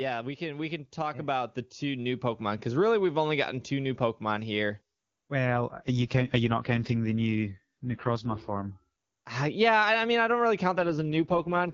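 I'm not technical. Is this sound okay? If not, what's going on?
No. From 0.38 to 2.71 s there is automatic gain rising. The phone's level control judged the sound too quiet and turned it up slowly. The voice and the background swell louder together, leading into "really we've only gotten".

Twice the voice turns rough and robotic: from 5.46 to 8.7 s, and from 10.78 s to the end, right after "mean I don't really". This is an AMR rate drop. A weak signal made the call squeeze the voice much harder. The clear HD Voice sound returns between the two drops.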